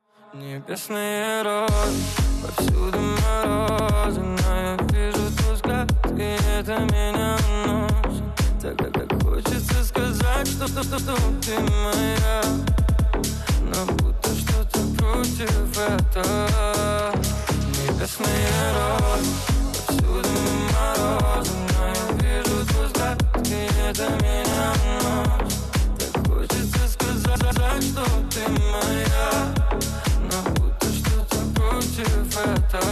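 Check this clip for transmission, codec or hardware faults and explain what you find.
Repeated frames occur seven times: at 3.69 s, 8.83 s, 10.66 s, 12.78 s, 20.35 s, 24.53 s and 27.35 s. A short run of compressed frames was written or delivered more than once, so the decoder replays that block. The blocks last about 52, 105 or 157 ms, consistent with 26 ms frames. Each plays one to three extra times and is heard as a rapid stutter. Together they add roughly 1.9 s.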